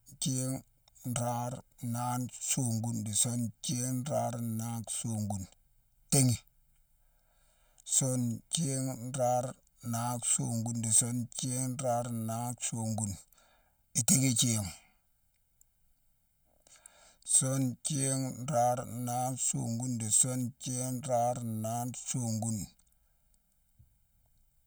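Throughout the speech, channel delay (comb filtering) gives a hollow, phasey tone: one channel lags by about a millisecond and a half, so summing to mono cancels evenly spaced frequencies, starting near 400 Hz. A spectrogram shows steady dark horizontal notch bands across the whole clip.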